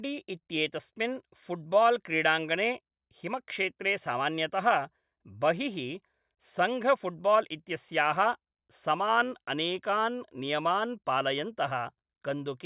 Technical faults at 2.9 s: none

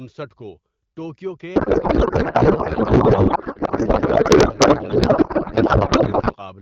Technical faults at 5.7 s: codec payload misread

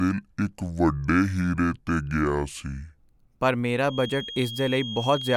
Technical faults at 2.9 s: section at the wrong speed

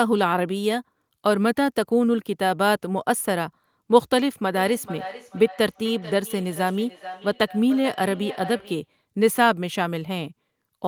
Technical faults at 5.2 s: feedback echo between two devices

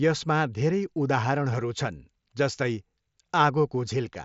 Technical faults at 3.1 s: none

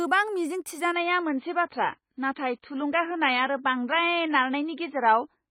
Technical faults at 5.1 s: adaptive stream at a lower bitrate

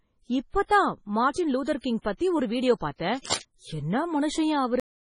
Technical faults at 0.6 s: MP3 compression

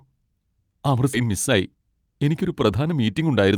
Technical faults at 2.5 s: jitter buffer speed-up

